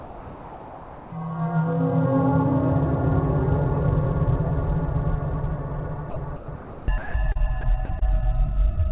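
From 0.0 to 1.12 s, the sender's voice detector most likely treated the opening sound as background and stopped transmitting. This is sound dropped by the voice detector: about 0.65 s of real sound is lost, and the receiver fills the whole 1.12 s with steady comfort noise.

Between 6.1 and 8.03 s, the detector repeatedly toggles transmission on and off, likely because of the same misjudgement. This is sound chopped by the voice detector: about 0.77 s in total is swapped for comfort noise, so the sound turns choppy. Throughout, the narrowband call codec leaves nothing above 4 kHz.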